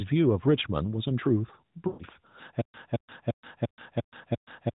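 It's a speech clip coming through the narrowband AMR path, everything capped around 4 kHz with a light codec edge. From 1.88 to 2.04 s there are lost AMR speech frames: the decoder keeps stretching the last good pitch and vocal tract shape while the gain sinks, so the sound smears and fades for about 120 ms, which fits roughly six 20 ms frames gone. Then from 2.61 s to the end there's a stutter with silent gaps: the same 218 ms burst comes back six times every 347 ms with about 128 ms of dead silence between. That's likely a stalled player replaying its last fragment, so the audio that belonged there is gone.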